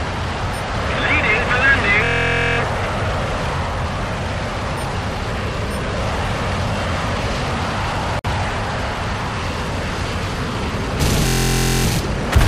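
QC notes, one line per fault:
2.04–2.58 s and 11.27–11.85 s, system hang loop: a 23 ms slice repeats about two dozen times at 43.1 Hz, giving a steady buzz, which fits a stalled 1024-sample ring buffer.
8.19–8.25 s, gap at a join of encoded pieces: a 54 ms gap with smeared edges, left by untrimmed encoder delay and end padding, before the sound resumes where it stopped.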